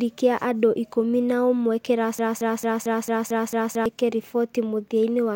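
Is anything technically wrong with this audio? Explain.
Yes. From 2.19 s to 3.86 s the speech falls into a broken-record loop: a 224 ms fragment plays seven times back to back, each pass identical. The likely cause is a stall in the player, encoder or stream that kept resending the last fragment it held. The audio meant for those seconds is lost. Unlike an echo or a brief stutter, the repeats neither fade nor vary, and the same slice returns exactly until the clip moves on.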